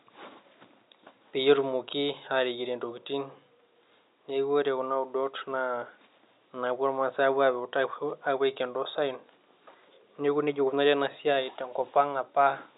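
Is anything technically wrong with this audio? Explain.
No, nothing is technically wrong.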